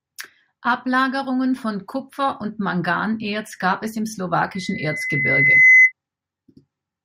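A speech clip with loudspeaker feedback squeal from 4.54 to 5.92 s, just after "gab es im": a 2 kHz tone swells over about a second to roughly 15 dB above the speech.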